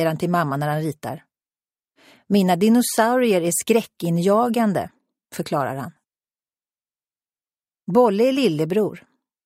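No technical faults can be heard anywhere in the clip.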